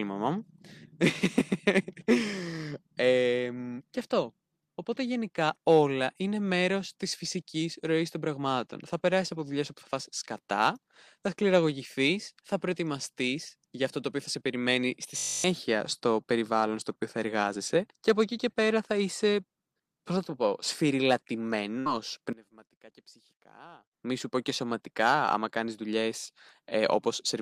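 At 15.18 s, right after "θα σε περιμένει στη", a system hang loop sets in: the system stalled while the sound hardware kept replaying one 20 ms stretch of its buffer. That slice repeats 13 times, a steady 50 Hz buzz until 15.44 s. About a third of a second of speech is lost before "στο περιβάλλον στο οποίο" resumes.

From 21.79 s to 21.89 s, a burst of packet loss leaves about 60 ms of audio undelivered. The receiver covers the gap by extending and fading the last sound for about 62 ms, so the speech smears into a brief held tail before it picks up again further along.

Between 22.33 s and 23.94 s, just before "μη σου πω και", the level collapses by about 22 dB and only a faint residue of the speech is left. The likely cause is one channel inverted: with one side's polarity reversed, the centred speech cancels when the channels are summed to mono.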